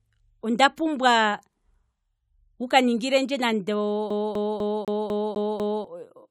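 Speech clip with a CD stuck on one turn from 4.10 to 5.84 s: a 0.25 s slice repeats seven times, seen as identical waveform blocks separated by brief silent gaps.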